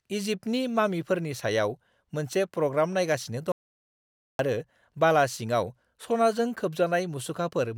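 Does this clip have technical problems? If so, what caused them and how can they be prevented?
Yes. The input path was most likely interrupted by a loose connection, a dropped wireless link or an accidental mute, while the recorder kept writing silence. This audio dropout to silence runs from 3.52 to 4.39 s: the speech cuts off abruptly and about 0.87 s is replaced by silence, with no room tone underneath. It then resumes mid-flow at "आरो बाला सिङाव सनाजों", and whatever was said in the gap is lost. Securing cables and connectors, monitoring input levels during recording, and avoiding unstable wireless links would prevent it.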